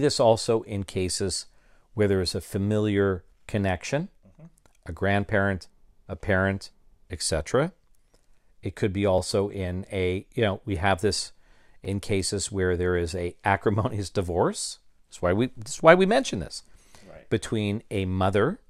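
Repeated buffer at 9.18 s, after "could be", and again at 11.85 s, after "know we have this": new audio failed to arrive in time, so the last block was played once more at the first point and twice more at the second. Each block lasts about 2.67 ms, which fits a 128-sample buffer, so the repeats are heard as a brief click or buzz rather than a stutter, with essentially nothing skipped.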